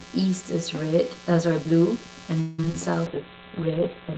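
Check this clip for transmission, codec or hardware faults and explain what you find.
Four faults are audible: a constant mains buzz, comb filtering from a channel delay, a burst of repeated stalls, and a call bitrate drop at the end.

Mains buzz runs through the whole clip. It is based on 60 Hz and sits roughly 20 dB below the speech. Sharp switching spikes, from something like a dimmer, rectifier or poor shielding, get into the signal twice per mains cycle. That spreads harmonics of 60 Hz well up into the kilohertz range. So you hear a steady, raspy buzz under the speech.

Channel delay (comb filtering) is also present throughout. One channel lags the other by around 10 ms, and the two are summed to mono. Content shared by both channels cancels at evenly spaced frequencies. The first notch falls somewhere near 40 Hz, and the rest repeat up the spectrum. The notches never move. The speech sounds hollow and phasey, as if heard through a tube.

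Repeated stalls (stutter) occur from 2.40 s to 2.74 s. Playback halts four times in that span. Late packets keep emptying the jitter buffer. Each time, the receiver stretches the last sound until new audio arrives. The longest wait is 180 ms, where the held sound fades. About 60 percent of the span is filled this way. Only about 30 ms is truly lost. The speech drags and stutters.

A call bitrate drop starts at 3.07 s and lasts to the end. It points to the encoder falling from about 32 kbps to about 10 kbps after the bandwidth estimate dropped. With so few bits, the coding becomes coarse. The audio bandwidth also shrinks from 20 kHz to 4 kHz. The final second sounds muffled, rough and slightly watery, with the upper frequencies gone.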